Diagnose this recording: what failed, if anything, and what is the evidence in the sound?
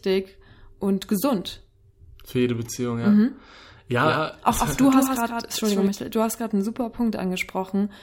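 Doubled audio track, 4.03 to 5.87 s: a dry full-band copy trails about 150 ms behind, roughly 5 dB down, likely from a second, slower capture path.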